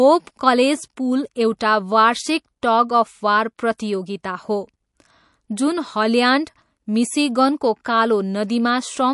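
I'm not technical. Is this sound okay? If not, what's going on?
No. Throughout the whole clip the speech sounds plainly watery and swirly, with s sounds turning metallic and everything above 11.3 kHz missing. That points to MP3 compression, likely squeezed hard, so the encoder dropped the treble and quieter detail to save space.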